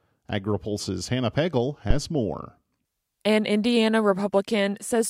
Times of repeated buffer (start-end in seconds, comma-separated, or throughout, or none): none